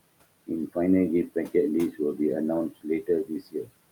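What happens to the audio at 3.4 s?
At 3.4 s the speech is cut by the noise suppressor. From 3.25 to 3.69 s the suppressor mistakes part of the speech for background and turns it down, by about 21 dB at the deepest point. Roughly a third of a second of sound is affected. It comes out swallowed and faint.

Noise suppressor artifacts are also present here, as they are throughout. The suppressor lowers the bands it treats as steady noise by about 21 dB, frame by frame. The room noise, about 20 dB below the speech, pumps, sinking between the words and rising under them.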